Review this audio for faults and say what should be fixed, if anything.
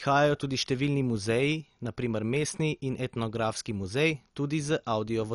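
The speech sounds dull and plainly gurgling for the whole clip, with a granular roughness and nothing at all above 11.3 kHz. This is likely MP2 compression: Layer II divides the signal into 32 sub-bands and, short of bits, shuts off the top ones and quantises the rest coarsely, so bands flicker in and out. The damage points to a rate of about 48 kbps. To prevent it, encode at a higher bitrate or keep a lossless original.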